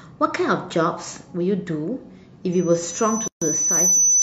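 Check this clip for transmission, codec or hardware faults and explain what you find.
Two faults are audible in this speech clip: a loudspeaker feedback squeal in the second half and a short silent gap at a join of encoded pieces inside it.

The loudspeaker feedback squeal starts at 2.52 s and runs to the end. A single tone at 6 kHz swells over about one and a half seconds until it sits about 5 dB above the speech. The microphone is hearing the loudspeaker it feeds, and at 6 kHz the round trip gains more than it loses, so that frequency keeps growing. Steady interference whine would be there at full level from the start. This tone builds, which marks a closed loop.

The gap at a join of encoded pieces runs from 3.28 to 3.42 s. The audio drops to silence for about 138 ms, with smeared edges, and then carries on from exactly where it stopped. Each separately encoded piece keeps its encoder's start-up delay and padded final frame, and that dead time stays in at the join. 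Joins would fall every 4 s, which points to pieces about that long. A packet-loss dropout would skip part of the sound. Nothing is missing here, only silence inserted.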